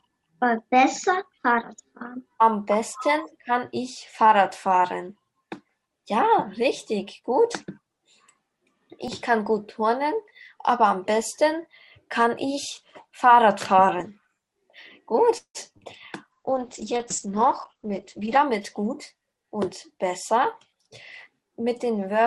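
At 9.08 s and again at 14.01 s there is a small jump in the sound, as if a sliver had been snipped out and the edges butted together. Each is a dropped buffer (overrun), likely from the program failing to collect its samples before the hardware overwrote them. Roughly 10 ms is lost each time, with no silence in between. The audio simply skips ahead across the join.

From 15.37 to 15.57 s the sound stops moving forward. The last moment is stretched into a fading buzzy tail that sinks into near silence for about 80 ms, and then the audio resumes exactly where it left off. This is a call audio freeze, likely caused by packets held up in transit so that the jitter buffer ran dry while the receiver kept extending the last sound. Nothing is missing, but about 170 ms of extra delay is inserted.

Shortly after, at 15.73–15.76 s and 15.78–15.82 s, come two brief smears, each like a tiny wobble. 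These are short concealed packet losses. About 20 ms of real audio failed to reach the decoder each time, and the receiver patched the holes by continuing the preceding sound before blending back into the genuine signal.

From 16.32 to 18.43 s the audio turns dull and rough, with a watery, coarse texture and the top end missing. This is a call bitrate drop. The bandwidth estimate collapsed and the encoder was forced to spend far fewer bits, which fits a fall from around 64 kbps to around 9 kbps. The audible band shrinks from about 20 kHz down to 8 kHz, so the brightness vanishes for just over two seconds.

Overlapping that, from 17.43 to 19.66 s, the sound runs noticeably hurried while its pitch stays the same. This is a jitter buffer speed-up at about 108% of normal rate. With more audio queued than the buffer aims to hold, the receiver repeatedly cut out short pitch-period-sized pieces to shrink the delay, trimming about a fifth of a second in total over that stretch.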